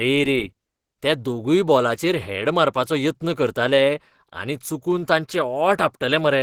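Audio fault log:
throughout Opus compression: the speech sounds plainly hoarse, rough and grainy, as the likely Opus encoder runs in its hybrid speech mode at a low rate near 16 kbps. Bands are filled with noise rather than left as holes, so it lacks the swirl of MP3.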